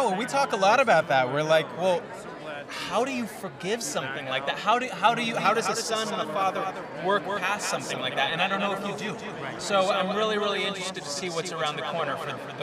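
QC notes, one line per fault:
5.37 s to end: doubled audio track. From 5.37 s a second full-band copy of the audio sits about 200 ms behind the original, roughly 5 dB quieter, and stays until the clip ends. It enters abruptly, with no fade, and carries no decay or room colour, so it reads as a hard slap-back repeat rather than reverb. The likely cause is the signal being captured a second time through a slower path, or an edit leaving two offset copies.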